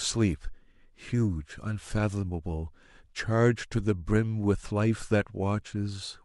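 No technical faults can be heard in the speech at any point.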